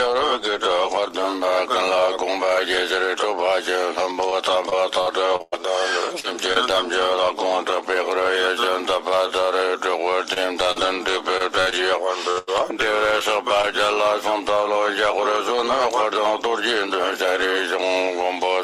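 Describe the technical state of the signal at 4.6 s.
At 4.6 s the signal is inside a stretch of repeated packet loss (robotic sound) running from 4.29 to 6.57 s. Seven short holes open up there, the longest about 104 ms and 280 ms in total, each patched by stretching the preceding sound. That leaves a choppy stutter across roughly 12% of the span. Unlike a single dropout, the breaks recur in quick succession, so the damage is an ongoing run of breaks rather than one clean gap.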